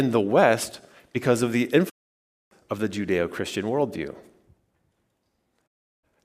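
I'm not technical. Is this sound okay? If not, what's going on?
No. Digital broadcast dropouts hit at 1.88 to 2.53 s and 5.66 to 6.05 s. The receiver lost the signal, quickly faded to silence, and that speech is gone.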